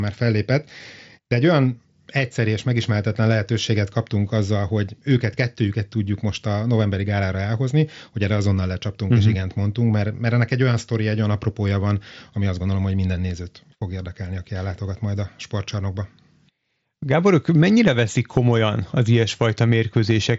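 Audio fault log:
No fault to log.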